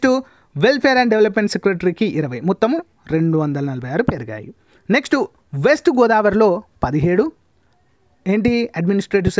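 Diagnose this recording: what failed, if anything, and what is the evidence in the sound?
Nothing stood out on listening that would point to a failure at any stage of the chain.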